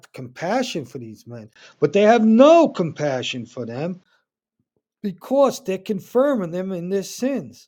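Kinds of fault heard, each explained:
Input switched to a poorer device: after "compassion for these men", a 20 ms gap at 1.54 s; until 4.06 s nothing above 7.6 kHz, level about 5 dB different, new noise about 45 dB down, likely another microphone. Spectrogram: flat ceiling at 7.6 kHz; waveform: gap, level step.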